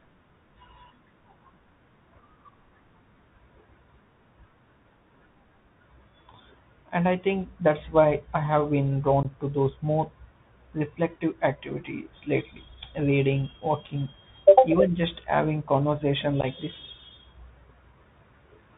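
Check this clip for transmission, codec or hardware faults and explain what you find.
Two faults are present. The whole clip carries the Bluetooth CVSD headset codec, and two brief bursts of unconcealed Bluetooth headset packet loss break up the speech.

The Bluetooth CVSD headset codec runs from start to finish, and its damage is plainly audible. The sound fits a 64 kbit/s CVSD link. This codec sends one bit per sample, a simple up-or-down step whose size adapts. Nothing above 4 kHz survives, so the speech is narrow and muffled. Loud, bright sounds outrun the step and distort. S sounds turn scratchy. A grainy hiss sits under everything.

Unconcealed Bluetooth headset packet loss appears twice. From 9.23 to 9.26 s, about 18.8 ms of audio is missing. The size of the gap suggests a handful of lost packets. From 16.41 to 16.45 s, about 22.5 ms drops out, scattered over 30 ms, with the longest single hole 11.2 ms. 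Several packets likely went missing there. Silence or an idle pattern filled each gap. The speech cuts out abruptly and comes back briefly quieter.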